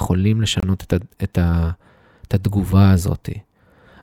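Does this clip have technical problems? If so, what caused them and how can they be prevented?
Yes. The speech cuts to silence from 0.60 to 0.63 s, a gap of about 26 ms, with smeared edges. This is a gap at a join of encoded pieces. Separately encoded pieces kept their start delay and end padding. Trim both, or encode the audio as one stream.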